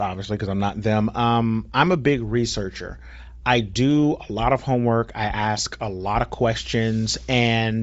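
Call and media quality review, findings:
Grainy, breathy top end on the speech throughout, plainly audible. Likely Bluetooth LC3 compression at a low rate, fitting about 32 kbps: upper spectrum zeroed and noise-filled.

Brief concealed gap at 5.58 s from a lost LE Audio frame, one 7.5 ms frame. The LC3 decoder reused the previous spectrum with random signs.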